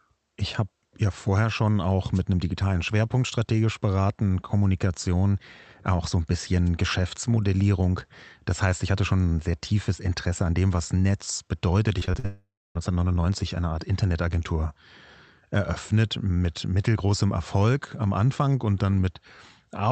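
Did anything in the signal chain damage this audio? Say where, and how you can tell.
Yes. At the wireless stage there are two brief noise hits, at 2.14–2.20 s and 6.66–6.69 s. Each sounds like a short swish of static over the speech. The analogue FM radio link fades when reflected paths cancel, and the receiver's noise floor surges up through the gap. On a spectrogram each hit is a thin vertical smear of broadband noise. On the waveform it is a fuzzy burst of a few tens of milliseconds riding on the speech.

The network stage shows repeated packet loss from 11.99 to 12.26 s. The speech turns choppy, with several short holes, the longest about 44 ms. About 39 percent of that stretch is concealment rather than real signal. The receiver patches each hole by extending the last sound, then hits another hole soon after. On a spectrogram this looks like stuttering, smeared harmonics with frozen-looking slices. 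The waveform shows jagged, repetitive segments.

Straight after, from 12.26 to 12.77 s, roughly half a second of audio never arrives. The last sound stretches into a fading buzz, then about 260 ms of near-silence before the speech resumes with that part missing. This points most likely to a long network dropout handled by the jitter buffer's concealment. On a spectrogram it is a decaying, blurred band followed by an empty gap. The waveform tapers down to a flat line. The Opus call path's 8 kHz audio bandwidth is also visible as a hard ceiling across the whole spectrogram.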